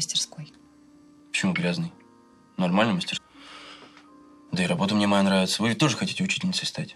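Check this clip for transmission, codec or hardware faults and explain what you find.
One fault is present. At 3.16 to 3.18 s there is damaged data in the compressed stream: corrupted bytes make the decoder misread those frames and lose sync until it finds the next valid frame header. That is heard as a brief glitch, about 22 ms long.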